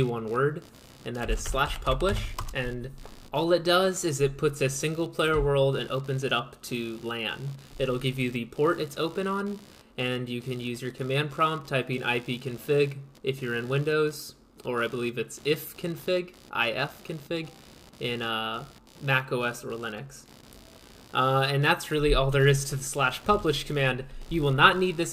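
From start to finish, a buzzing, chirping texture of computer activity noise sits under the sound, roughly 25 dB below it, pulsing at around 70 Hz. Changing load on the processor, graphics card or mouse disturbs the ground the audio circuit shares, and the interface picks that up. Unlike mains hum, whose pitch and level hold steady, this noise rises, falls and changes character with the machine's workload while ignoring the sound itself.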